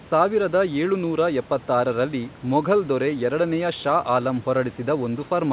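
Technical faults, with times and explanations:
Nothing's wrong here, just speech carried over an ordinary phone-style call link, which is why nothing comes through above 4 kHz.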